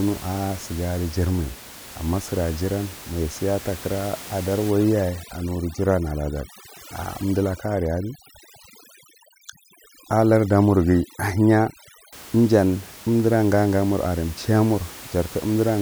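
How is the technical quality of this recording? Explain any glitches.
The main problem is heavy-handed noise reduction through the middle of the clip, sitting on top of room noise about 18 dB below the speech.

From 4.71 to 12.13 s, just before "ijan umdira gage", there's overdone noise removal. The reduction was pushed so hard that any frequency band near its noise estimate got cut almost to nothing, taking quieter parts of the speech with it. The background drops and breaks up into little twinkling specks.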